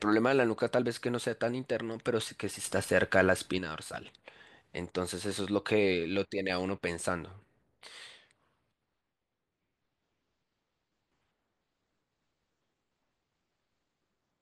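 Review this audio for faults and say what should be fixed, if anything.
Sudden gain jump at 2.64 s to 3.59 s (up about 7 dB) and from 7.86 s to the end (down about 6 dB): speech and background noise shift level together, likely an unramped gain change. Prevent it by applying gain changes with a short ramp or crossfade.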